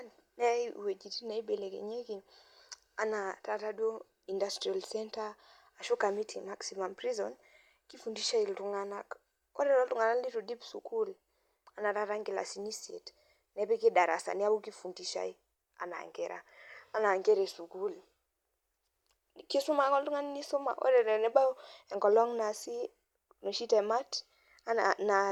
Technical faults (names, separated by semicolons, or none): none